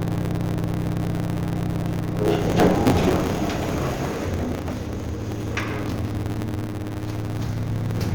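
A recording of sounds with a truncating block size mismatch running for the whole clip. One stage hands over longer blocks than the next stage takes in, so the tail of every block is discarded. The regular chopping produces a steady 100 Hz buzz at the block rate, and the material plays about 1.16 times faster than it should while keeping its timbre. The ratio fits 512-sample blocks being read short.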